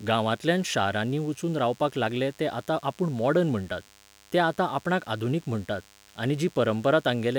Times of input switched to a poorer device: none

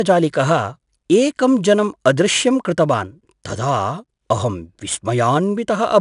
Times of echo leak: none

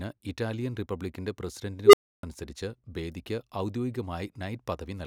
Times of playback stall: none

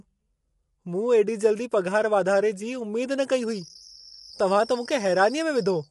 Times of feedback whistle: 3.36-5.91

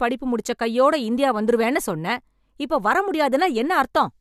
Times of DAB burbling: none

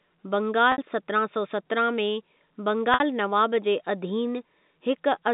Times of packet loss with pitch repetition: 0.72-0.78, 2.94-3.00

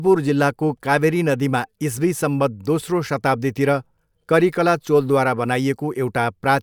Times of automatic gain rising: none

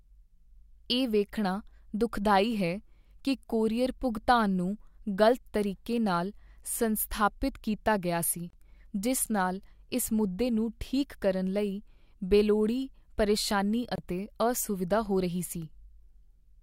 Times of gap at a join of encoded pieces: 8.50-8.53, 13.96-13.98

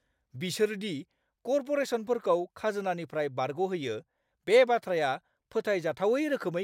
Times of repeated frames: none

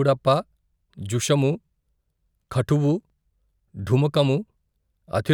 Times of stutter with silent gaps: none

